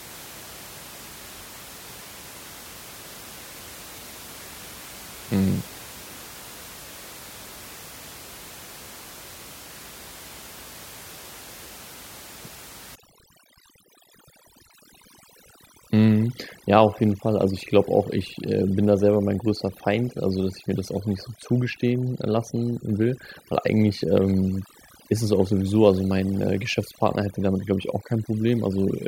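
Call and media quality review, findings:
Overdone noise removal, 12.95 s to end: background drops and breaks into twinkling specks. Suppressor over-attenuating bands near its noise estimate. Spectrogram: isolated musical-noise dots, ragged harmonics; room noise, about 19 dB below speech, pulled down.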